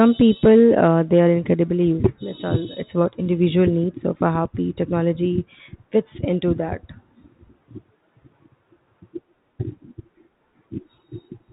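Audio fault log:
No faults logged for this speech clip, carried over G.711 mu-law telephone coding at 64 kbps.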